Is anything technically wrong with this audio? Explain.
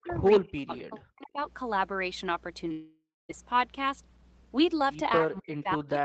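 Yes. A steady mains hum runs under the whole clip, a low 60 Hz tone sitting about 15 dB below the speech. It most likely comes from a ground loop or a nearby transformer feeding the power line into the signal path, and it never lets up.

Speech suppressed in double talk, from 0.0 to 0.17 s, from 0.4 to 1.4 s, and from 5.2 s to the end: the voice drops sharply, by as much as about 40 dB. This is likely an echo canceller ducking the talker while the far side is also speaking.

Echo leak, from 0.16 to 0.21 s and from 0.77 to 0.83 s: a faint copy of the voice trails it by 263 ms, about 20 to 25 dB down. It is likely loudspeaker echo that the far-end canceller failed to remove.

Long network dropout, from 2.71 to 3.31 s: roughly 580 ms of audio is lost. It is first covered by a decaying synthetic continuation and then by about 230 ms of silence, after which the speech returns with that part gone. 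The likely cause is a network stall during which no packets arrived.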